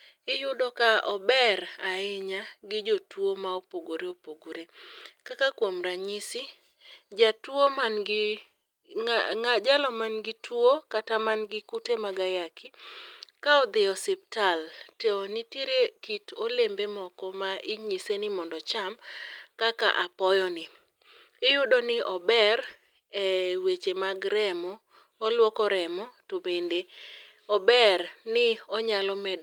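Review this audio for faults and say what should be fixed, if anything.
Nothing here needs fixing; I didn't hear any faults anywhere in the recording.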